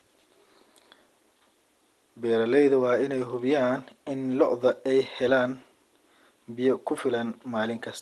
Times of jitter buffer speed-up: none

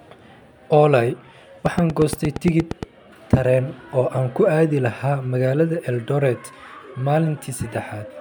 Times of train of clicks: 1.66-2.84

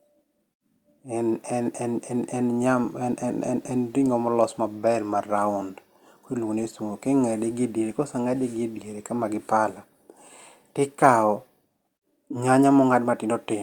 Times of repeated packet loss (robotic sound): none

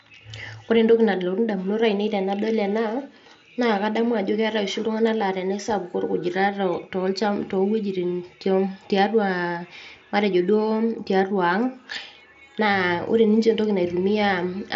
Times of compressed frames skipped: none

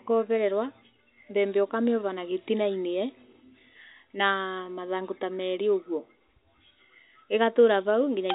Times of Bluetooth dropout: none

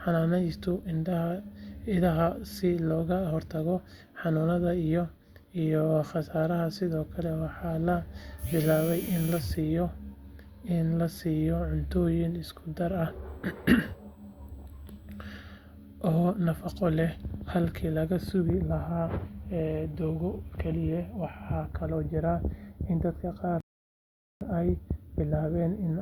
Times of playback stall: 23.60-24.41

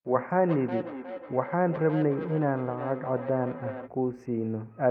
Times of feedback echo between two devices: 0.49-3.90

